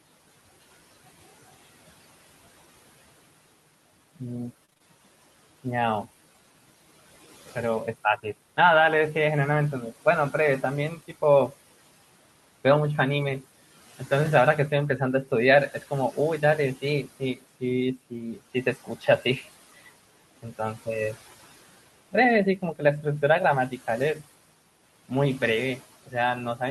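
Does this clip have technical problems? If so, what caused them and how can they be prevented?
Yes, three kinds of problem.

Noise suppressor artifacts run through the whole clip. The suppressor pulls down the background by about 16 dB, but it does this band by band and frame by frame, so the residue doesn't sit still. It dips between phrases and swells back under the speech. The room noise underneath, about 19 dB below the speech, is just the room and not a fault. To prevent it, use a gentler suppression setting or a quieter room so the suppressor has less to do.

Repeated packet loss gives a robotic sound from 4.65 to 4.82 s. In that short stretch the stream drops out in four quick holes, the longest about 26 ms, with around 80 ms missing in total. Each hole gets patched by stretching the previous sound, and about half the span ends up as that filler. The result is a brief choppy burst with pieces missing. 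To prevent it, use a more stable connection or a larger jitter buffer so late packets still arrive in time.

Speech cut by the noise suppressor happens twice. From 17.04 to 17.43 s, roughly a tenth of a second of speech drops by up to about 15 dB. From 18.10 to 19.08 s, roughly a third of a second in total dips by up to about 14 dB. The suppressor treated soft speech as noise, so those bits sound swallowed and faint. To prevent it, lower the suppression strength or use a mode that protects quiet speech.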